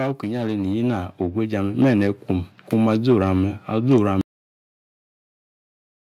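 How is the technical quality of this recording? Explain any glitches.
The recording has two clear faults. The level climbs early on, and the audio ends abruptly.

From 0.2 to 2.58 s there is automatic gain rising. The gain control judged the input too quiet and turned it up slowly, by about 9 dB. The speech and the background swell together over those two seconds.

At 4.21 s there is a cut-off end. The final buffers were never written or played out. The speech stops mid-sound with no natural decay. Digital silence follows for the rest of the file.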